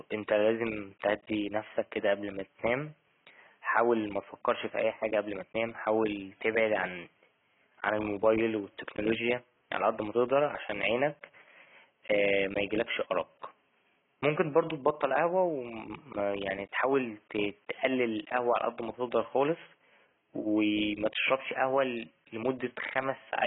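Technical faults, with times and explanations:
Throughout, AAC compression: the speech sounds dull and smeared, with nothing above 3.8 kHz and a warbling, fizzy texture on sibilants and held sounds. This is likely heavy AAC-LC coding, consistent with a bitrate near 16 kbps, which forces a low cut-off and coarsely quantised bands.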